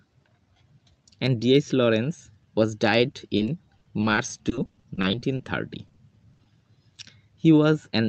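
Packets in this call-path audio arrived too late or not at all, and the receiver had to cover the holes. At 3.11–3.15 s and again at 3.37–3.41 s, short concealed packet loss replaced about 20 ms each time with a continuation of the preceding sound before crossfading back to the real signal. Each event is heard as a brief smear or wobble.

The damage then becomes sustained. Repeated packet loss (robotic sound) runs from 3.77 to 5.47 s, where sixteen separate gaps, none longer than 40 ms, leave roughly a fifth of the stretch synthesized. It returns from 5.87 to 6.47 s with five more gaps at a similar density. Because each patch is followed soon after by the next hole, the concealment keeps continuing the last sound, and those passages turn choppy, with fragments missing. Throughout, the top end stops near 8 kHz, which fits a 32 kbps Opus call path.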